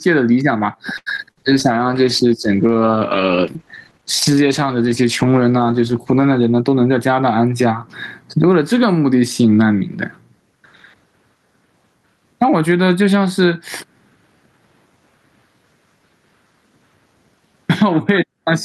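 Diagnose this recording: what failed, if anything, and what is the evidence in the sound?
Gain pumping runs through the whole recording. The swing is roughly 20 dB. Loud and soft passages sit squashed together. The likely cause is input gain set far too high, with a fast limiter clamping it.

A short stall from a late packet occurs from 0.97 to 1.08 s. This is a network and jitter-buffer fault. The buffer ran dry, and the receiver held the last sound for 88 ms until the packet arrived. Nothing is lost, but the delay grows by 88 ms.

Short concealed packet loss follows twice. The first is at 1.16 to 1.26 s, where 20 ms is missing. The second is at 1.31 to 1.37 s, where 40 ms is missing. The decoder bridged each gap by extending the last sound and then blending back. Each gap leaves a brief smear.

A call bitrate drop spans 1.36 to 7.62 s. The bandwidth estimate fell, and the encoder went from 48 to 13 kbps. 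It stayed at the lowest rate for about 4.5 s. Coarser coding at that rate makes the speech rough and muffled, with the top end cut away.

A jitter buffer speed-up runs from 6.39 to 7.37 s. The buffer held too much delay, so the receiver trimmed pitch-period slices, removing about a tenth of a second. Playback runs at 109 percent with unchanged pitch. It sounds hurried.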